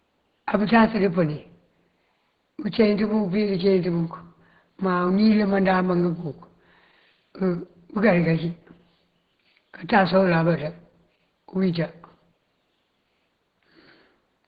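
From start to finish the speech has a muffled, hoarse quality, with a grainy roughness over voiced sounds and noisy, smeared high frequencies. This is plainly audible Opus compression, likely from the encoder running in its hybrid speech mode at a low rate; the degree of damage fits roughly 16 kbps. At that rate the upper bands are filled approximately rather than coded precisely. The faint room noise, about 53 dB below the speech, is part of the recording.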